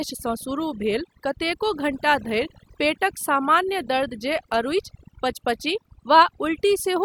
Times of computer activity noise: none

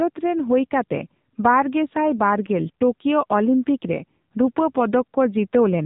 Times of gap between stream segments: none

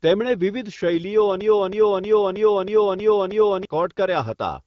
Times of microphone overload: none

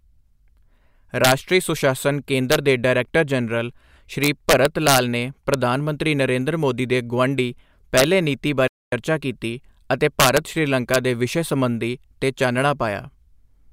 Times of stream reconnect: 8.68-8.93

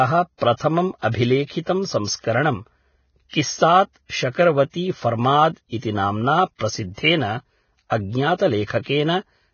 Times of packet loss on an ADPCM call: none

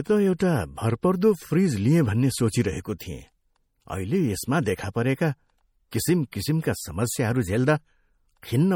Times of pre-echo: 0.39, 2.98, 5.91, 6.31

